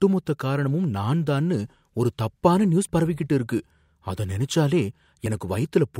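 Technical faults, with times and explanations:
5.26 s, overlap between stream segments: right after "பரவிக்கிட்டு இருக்கு அத நினைச்சாலே" there's a tiny skip where roughly 15 ms of the speech just drops out. Two stream segments, which look to be about 2 s long here, claimed overlapping time stamps, so the player trimmed the supposed duplicate even though that stretch was only there once. The waveform jumps straight across the gap, and that jump is what you hear as the little skip.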